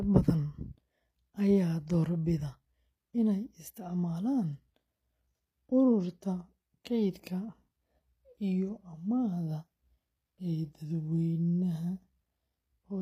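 From start to finish, the treble of the speech sounds gritty and metallic, with sibilants turning lispy and nothing above 15.5 kHz. This is likely HE-AAC compression: only the lower spectrum is coded, and the top is rebuilt from copied bands.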